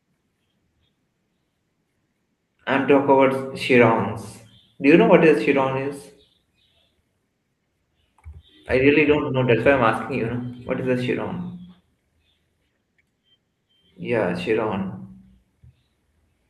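No technical faults are audible.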